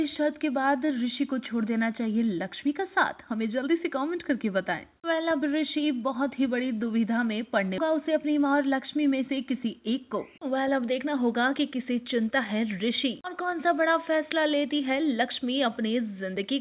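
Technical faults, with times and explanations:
7.78 s, skip ahead: the audio jumps forward with no gap, losing roughly a second of material. The jitter buffer was holding audio that had piled up, so it dropped that stretch and spliced the two sides almost directly together, which is why it feels like a hard cut.
7.88 to 11.86 s, jitter buffer speed-up: for about four seconds the sound runs roughly 6% fast at unchanged pitch, so it feels slightly hurried. The buffer was still holding more audio than it wanted, so it trimmed tiny pitch-period slices over and over, shaving off around a fifth of a second in total. Through all of this the call path's 4 kHz band limit stays audible.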